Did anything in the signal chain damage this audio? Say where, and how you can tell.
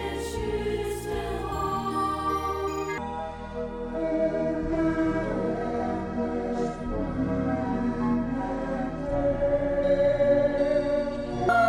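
Yes: a section at the wrong speed, likely a playback clock mismatch, plays at 0.52x from 2.98 to 11.49 s, slowing the sound and dropping pitch roughly ten semitones.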